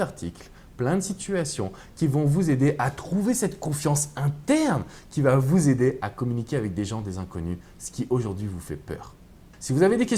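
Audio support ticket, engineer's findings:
No audible faults found; no action required.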